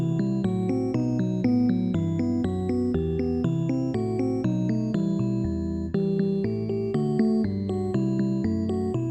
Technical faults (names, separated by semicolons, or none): mains hum